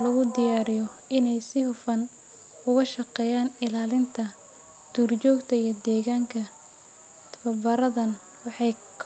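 Nothing stood out on listening to this speech, which carries the band-limited, coded character of a normal call path topping out around 8 kHz.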